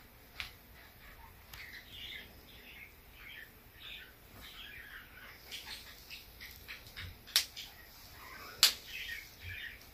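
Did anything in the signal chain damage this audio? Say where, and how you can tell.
No, nothing in the chain has left an audible mark on this audio at any stage.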